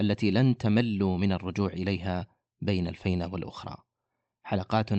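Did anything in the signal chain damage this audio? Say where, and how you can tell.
No, nothing in the chain damaged this speech. It has passed through a call path whose codec tops out at about 8 kHz, which fits Opus at a modest bitrate of around 24 kbps.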